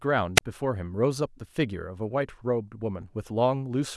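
It's a speech recording with one wireless microphone squelch dropout early on, from 0.36 to 0.41 s. In that half-tenth of a second you get a quick swell of hiss as the radio link from the analogue FM transmitter fades. Then the receiver's squelch slams the output shut for about 27 ms, leaving a near-silent hole before the signal recovers and the speech comes back. It's short.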